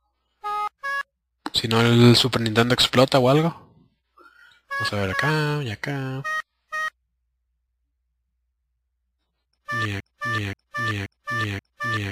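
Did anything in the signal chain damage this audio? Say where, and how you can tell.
Yes. From 10.00 s to the end, the audio falls into a broken-record loop: a 0.53 s fragment plays four times back to back, each pass identical, with no new material between them. Exact repetition at a fixed period points to the playback or streaming buffer rather than the source. Most likely the player or stream stalled and kept re-sending the last block it held, so whatever should have followed 10.00 s is lost.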